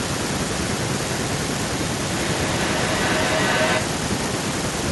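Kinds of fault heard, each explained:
Feedback echo between two devices: a second device in the same room is playing back what this microphone sent, and the microphone captures that playback again, which this end's echo canceller does not remove because it only handles its own output. From 2.16 s to 4.15 s the speech returns at an interval of roughly 400 ms, thinner and ringing, and the repeats build to about 1 dB above the speech instead of dying away.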